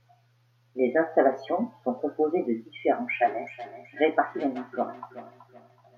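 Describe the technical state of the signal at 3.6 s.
Feedback echo between two devices is present at 3.6 s, within a span that runs from 2.92 s to the end of the clip. A second device in the same room is playing back what the first microphone sent, and that microphone picks it up again, beyond the reach of its own echo canceller. Each phrase returns roughly every 0.4 s, thinner and more ringing, peaking at about 18 dB below the speech.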